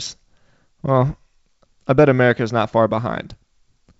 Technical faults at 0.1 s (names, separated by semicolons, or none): none